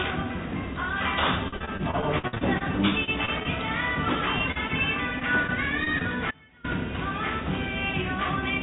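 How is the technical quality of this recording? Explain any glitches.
The recording is impaired by packet loss and one brief dropout. Its band stops at 4 kHz, consistent with the G.711 call path it passed through.

Repeated packet loss (robotic sound) occurs at 1.48–2.62 s, 3.04–3.47 s and 5.19–6.04 s. Lost packets are patched by extending earlier audio, which produces choppy sound. On a spectrogram this shows as smeared, striped blocks. The first span is worst, with about 28% concealed.

Short concealed packet loss occurs at 4.52–4.57 s and 4.67–4.71 s. Gaps of 20–40 ms are filled from the preceding sound, so each is heard as a brief smear or wobble. On a spectrogram, each appears as a thin column of repeated texture.

An audio dropout to a faint residue runs from 6.31 to 6.64 s. The sound falls abruptly to a faint remnant roughly 25 dB down, likely from the signal being lost while the path stayed live. 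In the waveform this appears as a sudden near-flat section.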